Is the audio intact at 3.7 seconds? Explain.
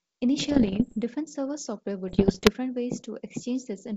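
Yes, the speech at 3.7 seconds is intact, carried cleanly through G.722 wideband telephone coding at 64 kbit/s.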